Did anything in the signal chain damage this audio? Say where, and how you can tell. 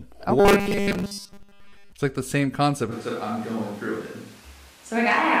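Yes. From 0.4 to 1.92 s, just before "it's like the same", the speech becomes a rigid metallic buzz pitched at 200 Hz. This is robotic sound from repeated short buffers, likely a driver or buffer underrun where the software loops the last 5 ms instead of waiting for fresh audio. Most of the real signal in that stretch is skipped. On a waveform the same 5 ms shape visibly repeats. A spectrogram shows evenly spaced harmonic lines every 200 Hz that ignore the natural pitch contour.

At 2.93 s, right after "like the same concept", the sound abruptly turns roomy and hollow and stays that way to the end. This is a switch to a distant microphone at the capture stage. The close mic has likely dropped out, and a far one picks up the room. The level barely changes, but background noise rises to about 25 dB below the speech. A spectrogram shows thinner low frequencies, smeared reverberant tails after each syllable, and a raised, steady noise floor from the switch point onward.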